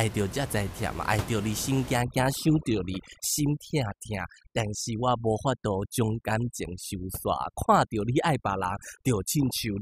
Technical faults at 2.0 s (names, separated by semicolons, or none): overdone noise removal